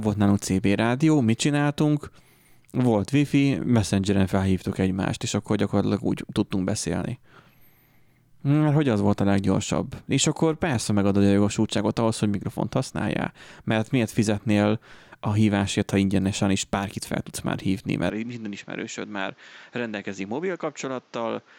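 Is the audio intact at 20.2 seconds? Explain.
No. From 18.10 s to the end at 21.59 s, the speech turns duller and about 10 dB quieter with no gap, and a new, faint noise floor appears. The likely cause is an input switched to a poorer device, which passes nothing above 7.6 kHz.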